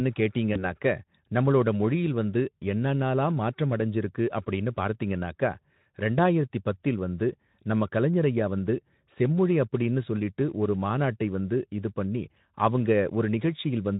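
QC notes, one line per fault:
0.53–0.65 s, VoIP packet loss concealed by the speech codec: a brief gap, consistent with one lost 20 ms frame, is filled by the Speex decoder extending its last pitch and filter at falling gain, so the speech smears into a fading buzz or coloured noise and stays weakened until about 0.65 s.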